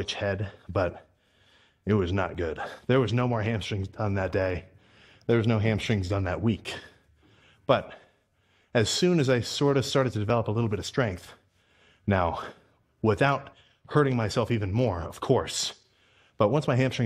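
The audio has overlap between stream segments: brief skips at 2.35, 10.3 and 14.31 s, where milliseconds are removed rather than silenced, unlike dropouts, on 2-second segment boundaries.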